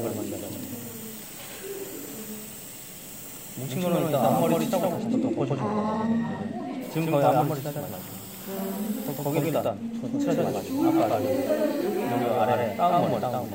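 The audio carries a doubled audio track throughout: an equally loud full-band copy trails by roughly a tenth of a second, most likely from a second, slower capture path.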